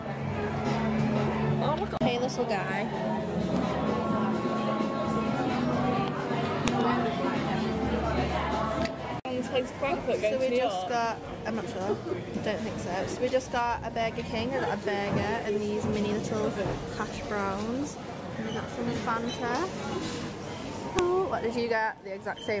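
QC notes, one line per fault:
6.68 s and 20.99 s, file header played as audio: separately encoded pieces were joined or streamed without their WAV headers being removed, so at each join the header's few dozen bytes were read as sample values. Those bytes bear no relation to the waveform on either side, and a burst of them lasting about a millisecond jumps far from the surrounding level. Each is heard as a sharp, loud click or snap marking where a new piece begins, whatever the sound is doing at that moment.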